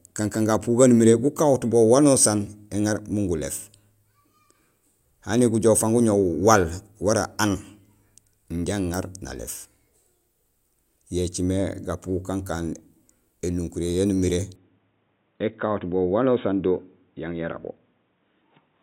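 Input switched to a poorer device, from 14.56 s to the end, just after "yaan umiré": the speech abruptly loses everything above 3.8 kHz and turns dull and boxy, with no gap at the change. The likely cause is the recording system swapping its input mid-take to another microphone or a headset's call profile, whose narrower band gives the new tone. Loudness stays about the same, and the new device adds background noise around 50 dB below the speech.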